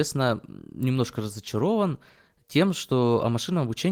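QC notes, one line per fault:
No faults to note, so there are no QC lines for this speech clip.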